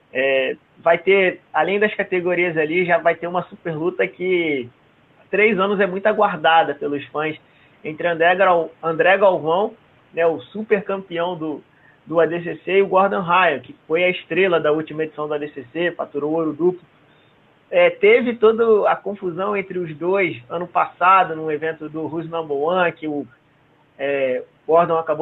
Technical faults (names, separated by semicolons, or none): none